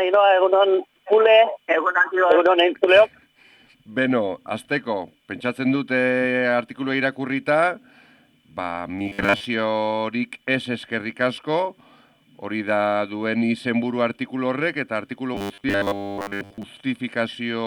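Robotic sound from repeated short buffers affects the audio at 8.99–9.48 s and 15.35–16.64 s: a rigid 100 Hz buzz, likely from roughly 10 ms buffers being repeated in place of most of the real audio.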